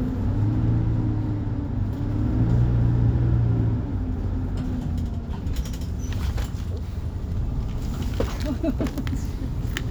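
Nothing technical trips up this everyday-sound recording; there's no fault to point to anywhere in it.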